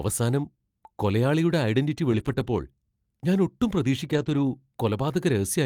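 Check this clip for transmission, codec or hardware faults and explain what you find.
Two brief stretches of lost packets rebuilt from error correction break into the speech, at 2.11 to 2.45 s and 4.13 to 4.39 s. A lost packet rebuilt from error correction occurs when each missing packet is replaced by a low-bitrate copy carried in the next one, so the sound never drops out. The repairs span about 180 ms, which fits nine 20 ms packets, and 140 ms, which fits seven. Both passages turn briefly rougher and grainier. Unlike guessed concealment, there is no buzzy repetition or fade, and the actual sound continues at reduced quality.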